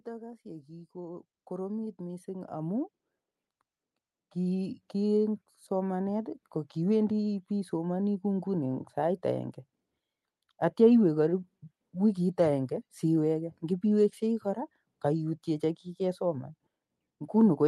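From 0.05 to 8.92 s, automatic gain rising lifts the level by about 16 dB as the gain control decides the input is too quiet. The background swells along with the speech, which separates this from a talker moving closer. Throughout, the call codec's top end stops near 12 kHz, consistent with Opus at 32 kbps.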